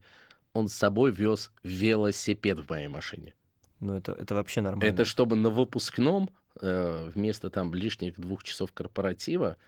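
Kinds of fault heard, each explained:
No technical faults can be heard in this speech, and the signal keeps the full-band character of a moderate-rate Opus voice encoding.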